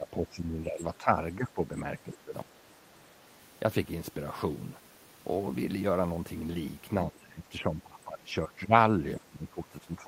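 The speech repeatedly dips, sinking by around 10 to 15 dB from 0 to 0.82 s, 0.98 to 1.12 s, 1.37 to 1.59 s, 2.04 to 2.67 s, 7.1 to 8.73 s and 9.19 s to the end. This is likely speech suppressed in double talk, where an echo canceller could not separate the near talker from overlapping far-end echo and pulled the near talker down too.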